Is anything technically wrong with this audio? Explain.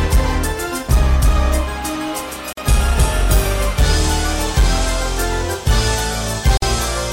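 Yes. The audio was encoded as separate pieces about 4.0 s long and joined without trimming, so each join leaves a gap at a join of encoded pieces. The encoder's start-up delay and last-frame padding both remain at each boundary. The result is a gap of about 46 ms from 2.53 to 2.57 s and about 49 ms from 6.57 to 6.62 s. Each one cuts into continuous sound with smeared edges, and the sound resumes where it stopped.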